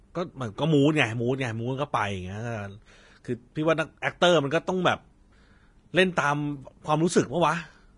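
From start to finish the speech carries plainly audible damage, likely from Vorbis compression at a bitrate that fits about 32 kbps. Coarsely quantised treble turns hissy and grainy, attacks blur, and a spectrogram shows a hard ceiling at 10.6 kHz above speckled upper bands.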